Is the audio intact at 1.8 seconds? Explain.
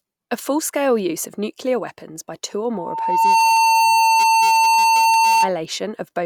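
Yes, at 1.8 seconds the speech plays through cleanly, with no dropout, click, distortion or other technical fault at that moment.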